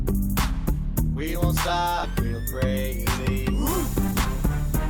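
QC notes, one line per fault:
2.03 to 2.05 s, skip ahead: playback jumps straight forward with no gap filled, as about a second of audio was discarded, likely because the jitter buffer overflowed while later audio was already waiting. The two sides are joined almost directly, so the sound lurches abruptly with a chunk simply absent. On a waveform the envelope changes suddenly at one point with no silence; a spectrogram shows an abrupt vertical seam where unrelated content abuts.
3.83 to 4.43 s, jitter buffer speed-up: the buffer was holding more audio than its target, so the receiver shaved out short slices of one or a few pitch periods again and again, removing roughly 150 ms. The sound runs at 120% speed with unchanged pitch and comes across as hurried. On a spectrogram harmonics stay at the same frequencies while events crowd closer in time; the waveform shows compressed spacing with tiny splice points between periods.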